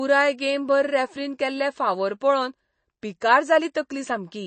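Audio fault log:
throughout, MP3 compression: Nothing remains above about 8.3 kHz, so the treble stops at a hard ceiling. The sound has a watery, swirling texture as weak frequency lines drop in and out between frames, and s sounds turn metallic. This is likely an MP3 encoder starved of bits, which fits a low bitrate around 32 kbps. A simple low-pass filter would dull the top just the same, but it would not make the remaining spectrum shimmer and chirp like this.
3.74 s, pre-echo: Right after "केल्ले फावोर पळोवन पिकार", a brief hiss spreads about 11 ms ahead of a sharp onset, and the attack itself sounds blunted. The codec spread quantisation noise across its whole transform block, and because the attack fell late in that block, noise sized for the loud part filled the quiet moment before it. A click or dropout would sit exactly at the event, but this noise arrives before the attack it belongs to.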